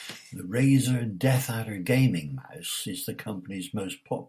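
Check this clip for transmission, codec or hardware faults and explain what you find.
Nothing faulty can be heard anywhere in this speech.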